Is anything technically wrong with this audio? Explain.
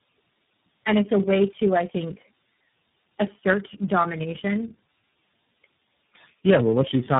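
Yes. Throughout, the speech has tandem speech coding: repeated decoding and re-encoding compounds roughness, muffling and warble beyond any single codec, which fits about four speech codecs in a row, with nothing above 3.8 kHz.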